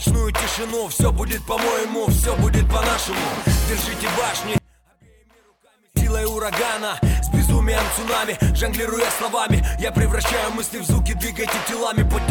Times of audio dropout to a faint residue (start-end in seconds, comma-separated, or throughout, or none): 4.58-5.97